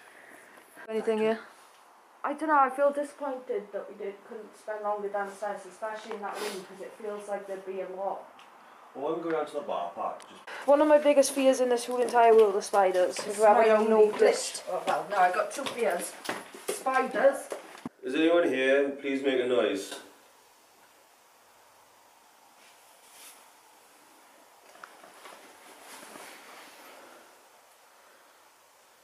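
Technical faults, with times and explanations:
No technical faults can be heard anywhere in this audio.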